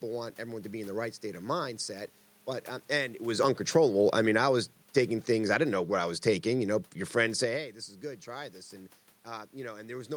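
A speech clip with automatic gain falling from 3.25 s to 7.76 s, starting after "but um and it" and ending before "is good". The gain control judged the input too loud, or its background noise too strong, and lowered its gain gradually, by about 8 dB. The voice and the room noise sink together. The level shifts near 3 s and 7.5 s, where the talker moves, are separate from this fault.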